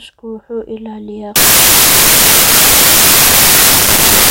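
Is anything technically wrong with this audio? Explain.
Yes. From about 1.36 s right through to the end, the samples are built from the wrong bytes. The reader is combining each sample's bytes incorrectly, whether off by one byte, in swapped order or with the wrong alignment, so the rapidly changing low bits end up as the big part of every value. The speech turns into loud, harsh broadband noise there, close to white on the louder sounds.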